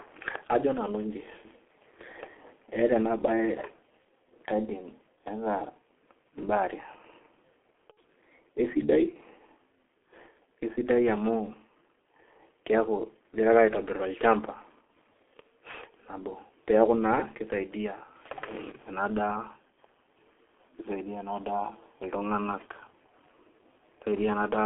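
Muffled, hoarse speech with smeared consonants runs through the whole recording. The sound is confined to roughly 250 Hz to 3.4 kHz and heavily damaged by the G.723.1 codec, which at 6.3 kbit/s rebuilds the voice from a coarse model updated only every 30 ms. From 7.92 to 7.97 s the speech briefly turns into a fading smear. This is VoIP packet loss concealed by the speech codec, where the decoder stretched its last pitch and filter over a gap of about 60 ms, which fits two lost 30 ms frames.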